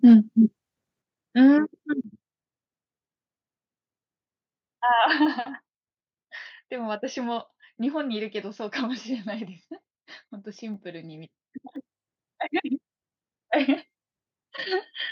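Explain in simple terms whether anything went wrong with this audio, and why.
Three problems can be heard in this speech recording.

At the very start, from 0.05 to 0.15 s, the loudest part has a harsh, crackly edge. That is likely microphone overload: the input was set so high that the tops of the sound waves were flattened, with roughly a tenth of that stretch cut off.

Right after that, the level drops abruptly twice, at 1.02 s and again at 2.04 s. The speech and the background fall together, which points to microphone volume stepped down, likely the call software reacting to that too-loud opening by turning the input down in two steps.

At 11.76 s the level jumps back up in one step, with speech and background rising together. This is microphone volume stepped up: the software judged the input too quiet and raised the microphone setting suddenly instead of easing it up.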